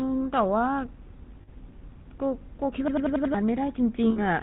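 From start to finish the speech has a buzzy, gravelly roughness, with nothing above 4 kHz and the dull, boxed-in quality of an old mobile call. This is the GSM full-rate codec, consistent with its 13 kbps mode. It rebuilds the voice from a vocal-tract model fed by a coarse pulse train that keeps only every third excitation sample. That thin, pulsed excitation is what makes the damage plainly audible.

From 1.42 to 1.49 s the sound briefly freezes into a rough, metallic ring. Those are lost GSM frames. The decoder covered about 60 ms of missing data, which fits three 20 ms frames, by repeating the last good frame's settings. The result is a held, ringing smear in place of the real sound.

At 2.88 s a stuttering repetition starts and runs to 3.34 s. A short piece of about 93 ms is replayed five times at about 10.8 Hz, heard as a mechanical rattle. This is a system hang loop. The software froze while the sound hardware kept cycling through the same ring buffer, and the length fits a 4096-sample buffer. 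Roughly half a second of real audio never arrives.

From 4.10 to 4.21 s the same metallic, held ring returns as a second burst of lost GSM frames. Again about 60 ms, or three frames, is concealed by repeating the last good frame.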